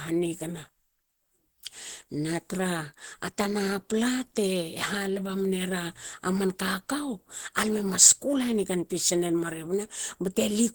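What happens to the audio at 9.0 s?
At 9.0 s, as throughout, the sound shows Opus compression, likely from an encoder short of bits, which fits about 16 kbps in hybrid speech mode. Filled-in bands make the speech hoarse and grainy, though content still reaches about 20.1 kHz.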